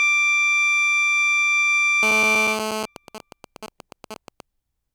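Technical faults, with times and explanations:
2.03–2.86 s, GSM phone buzz: a hard, raspy 217 Hz buzz with a dense stack of harmonics sits steadily over the music at about -6 dB, unrelated to it. A nearby 2G phone in a call transmits radio bursts 217 times a second, and the audio circuit rectifies them.
2.96–4.41 s, GSM signalling bursts: even ticks with a longer 217 Hz buzz twice a second, well below the music. A nearby 2G phone, in a call but with its user silent, sends only short groups of radio bursts, which the audio circuit rectifies.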